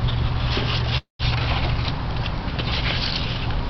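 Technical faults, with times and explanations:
0.97 to 1.22 s, call audio freeze: the sound stops moving forward and the last instant is stretched into a fading buzz or hiss that drops to silence for about 130 ms of the roughly quarter-second stall. The likely cause is packets held up in transit, so the jitter buffer ran dry and the receiver filled 218 ms on its own. Playback then resumes exactly where it stopped, with nothing lost, but everything afterwards now arrives 218 ms later.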